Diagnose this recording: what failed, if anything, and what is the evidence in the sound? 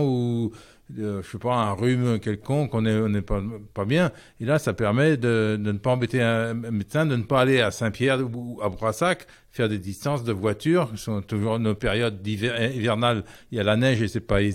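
Nothing stood out on listening that would point to a failure at any stage of the chain.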